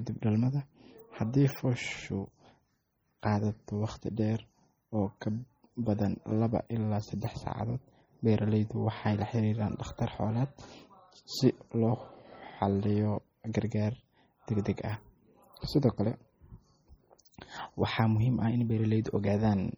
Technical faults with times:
0.00-19.77 MP3 compression
13.53 pre-echo

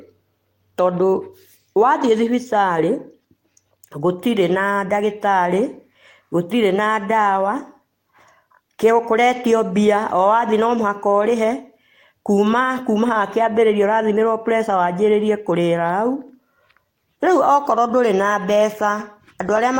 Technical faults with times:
none

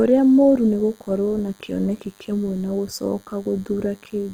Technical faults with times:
0.00-4.33 DECT cordless phone buzz
0.00-4.33 Opus compression

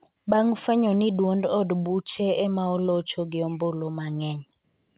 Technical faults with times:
none

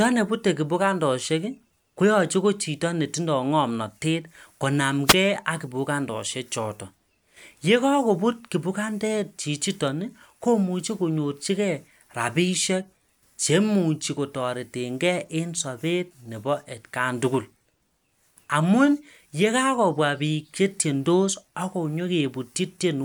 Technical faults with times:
5.05-5.15 wireless microphone noise hit

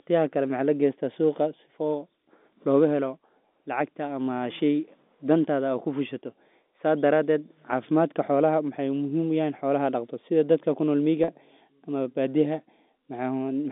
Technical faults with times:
11.24-11.28 packet loss with pitch repetition

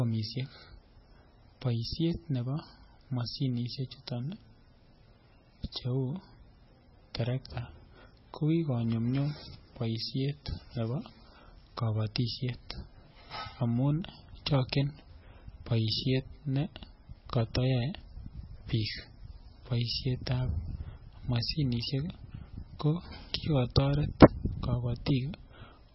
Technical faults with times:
0.00-25.94 MP3 compression
0.11-25.82 clock slip clicks

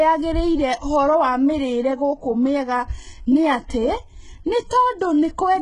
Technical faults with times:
0.00-5.62 HE-AAC compression

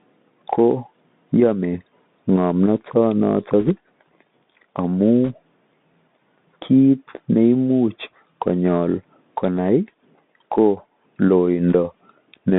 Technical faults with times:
0.00-12.58 Bluetooth CVSD headset codec
3.60-3.69 bit errors on a Bluetooth voice link
5.25-5.31 bit errors on a Bluetooth voice link
11.69-11.75 bit errors on a Bluetooth voice link

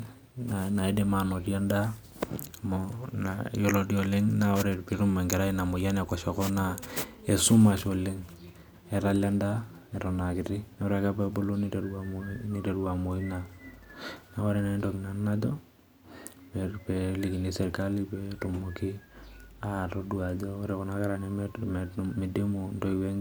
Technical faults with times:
none

